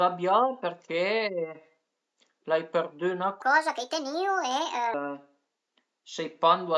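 From 3.42 to 4.94 s, a wrong sample rate speeds the speech 1.5 times and raises pitch seven semitones together. A pure pitch shift would leave the timing alone.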